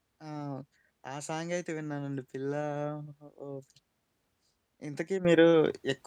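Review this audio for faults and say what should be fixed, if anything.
Sudden gain jump at 5.25 s, lasting to the end of the recording at 6.07 s: the level rises by about 10 dB in a single step, and the speech and the background noise both get louder at the same instant and stay there. Because the noise floor steps up along with the voice, this is a change in digital gain rather than the talker getting louder, likely from a gain setting or bit shift applied instantly instead of ramped in. Prevent it by ramping every gain change smoothly over several milliseconds rather than switching it between two samples.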